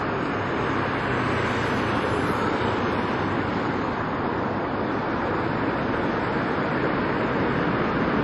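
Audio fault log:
Throughout: transcoding between lossy codecs. Nothing sounds above 12 kHz, and several kinds of coding damage are heard at once. Each later codec spent its bits re-coding the previous one's artefacts and then added its own. A single low-bitrate encode would have one consistent flavour of distortion. This layered mix likely comes from a chain such as MP3, then Vorbis, then HE-AAC.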